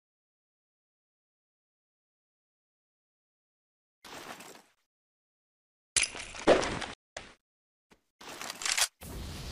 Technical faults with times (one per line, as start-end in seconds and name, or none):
4.75-4.77 gap between chunks
6.94-7.17 stream reconnect
7.37-7.40 gap between chunks